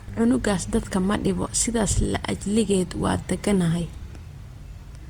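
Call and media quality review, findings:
Generation loss throughout the speech. Swirly, hollow, smeared sound with blurred attacks. Likely repeated lossy re-encoding, around seven passes, consistent with Opus near 64 kbit/s.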